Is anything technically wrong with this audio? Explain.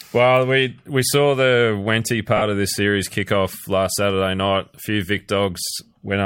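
Yes. From 2.37 to 2.42 s, just before "of this series kick", lost LE Audio frames leave a gap of about 45 ms, which fits six short LC3 frames. The decoder fills it by repeating the last spectrum with random signs, so the sound turns into a brief noisy smear. A plain dropout would go silent instead. This gap is too short for the concealment to fade all the way to silence.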